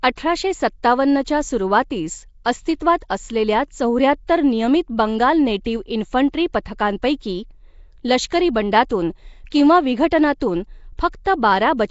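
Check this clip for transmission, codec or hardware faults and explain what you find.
One codec fault runs through the whole speech clip. The speech sounds rough and hissy, with a smeared, underwater blur and nothing above 7.7 kHz. This is likely Nellymoser compression: coarse block coding leaves weak bands empty and fills them with noise, consistent with a low bitrate around 32 kbps.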